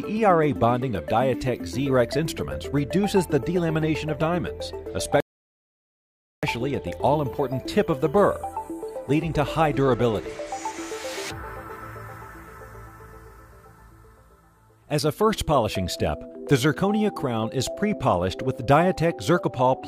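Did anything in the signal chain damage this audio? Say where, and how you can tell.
Yes, at playback: a rebuffering stall runs from 5.20 to 6.43 s. The sound drops to silence there, then picks up exactly where it left off, with no skipped material and no jump in content. That's the giveaway. The player drained its downloaded buffer, had nothing left to play, and sat waiting for more data to arrive. Nothing is lost, but the whole rest of the clip is pushed back by about 1.2 s.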